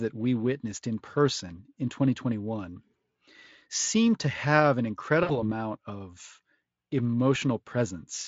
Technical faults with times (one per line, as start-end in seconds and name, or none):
5.23-5.44 VoIP packet loss concealed by the speech codec